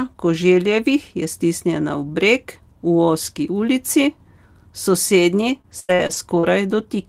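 From 5.49 to 6.45 s, repeated packet loss hits the speech stream: five gaps, the longest 91 ms, with about 23% of that stretch concealed by extending the previous sound. The voice turns choppy, with pieces missing.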